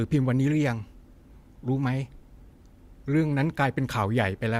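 A speech recording, and nothing about it is technically wrong.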